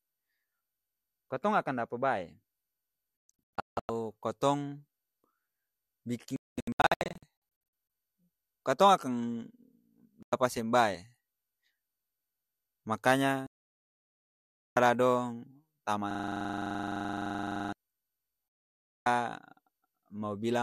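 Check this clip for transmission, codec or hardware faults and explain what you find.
The speech clip has two kinds of fault: repeated digital broadcast dropouts and one system hang loop.

Digital broadcast dropouts occur at 3.29–3.90 s, 6.36–7.23 s, 10.23–10.33 s (just before "seng bae"), 13.47–14.77 s and 18.68–19.06 s. The receiver mutes whenever frames are missing or corrupt. The first two are broken into patches: 552 ms lost across 720 ms with a longest hole of 168 ms, and 840 ms across about 1.5 s with a longest hole of 216 ms. That gives a choppy, sputtering gap. The others are single holes of 96 ms, 1.3 s and 576 ms. Unlike a hang loop, these gaps are silent, and the speech resumes further along.

The system hang loop runs from 16.11 to 17.73 s. The playback system froze while the sound hardware kept replaying its ring buffer. One 42.67 ms fragment repeats 38 times at 23.4 Hz, which fits a 2048-sample buffer. 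The result is a rapid, rattling buzz, closer to a stutter than a tone. What separates it from a dropout is that the sound never goes silent. The same sliver recurs identically, and the programme does not move forward until the loop ends.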